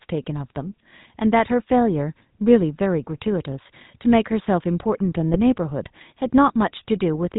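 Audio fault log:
Throughout: GSM full-rate codec, a buzzy, gravelly speech tone with nothing above 4 kHz, from pulse-excited vocal-tract modelling at a rate that fits 13 kbps, plainly audible.
5.34 to 5.38 s: GSM bit errors, a brief squawk and gargle as corrupted filter, pitch or gain values distort the decoded spectrum and level over a few frames.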